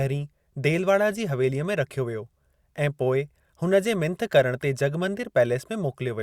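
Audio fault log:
No fault can be heard in the speech recording; the signal holds steady and intact throughout, with nothing in it that calls for a timed entry.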